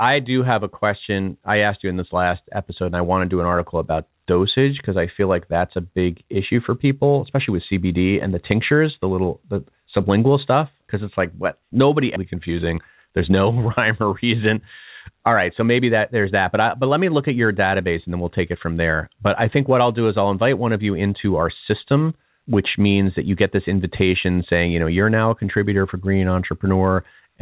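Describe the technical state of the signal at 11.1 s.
At 11.1 s the speech comes through intact, with no fault at that moment, only the narrowband character of the G.711 call path, which leaves nothing above 4 kHz.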